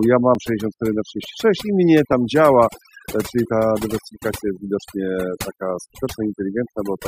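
Overdone noise removal runs through the whole speech clip. The noise reducer was pushed hard enough that individual frequency bands are cut far down or switched off whenever they sit close to its noise estimate, taking quieter parts of the voice with them. The background sinks and breaks into twinkling, warbling specks, and the voice can come across watery or thin. On a spectrogram the gaps between syllables show scattered isolated dots instead of a smooth noise floor.

Compressed frames skipped appear twice: from 0.35 to 0.37 s, and again at 2.12 s, between "i mnie" and "działa e czyli ta". Each time whole frames of the compressed stream were never played, either missing from the file or rejected by the decoder as damaged, so the audio leaps forward by about 20 ms. The join is heard as a brief blip or click.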